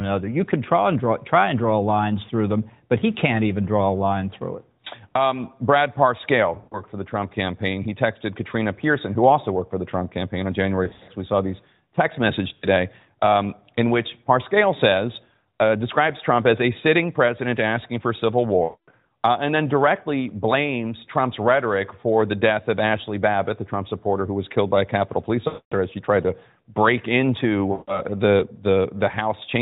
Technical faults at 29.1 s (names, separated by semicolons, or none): none